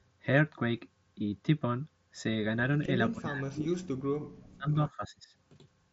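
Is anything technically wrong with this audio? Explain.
Yes. Two related faults show up in the second half of this speech clip.

From 3.12 to 3.17 s there is a short echo leak: a faint copy of the speech returns about 302 ms late, far below the main level. This is likely a loudspeaker on one end of the call whose echo canceller let some of its microphone pickup through. Unlike reverberation, it is a single discrete delayed repeat, not a smooth decay.

Starting at the same moment, 3.12 to 3.92 s, and again from 4.39 to 5.29 s, the speech is suppressed in double talk. The level drops steeply, nearly to silence at its deepest, across most of each span. This is likely an echo canceller turning everything down while both sides spoke at once. Unlike a network dropout, the loss follows the overlap and comes in level dips rather than clean gaps with clicks. The mSBC headset path's ceiling of 7.7 kHz is present throughout but is not part of these faults.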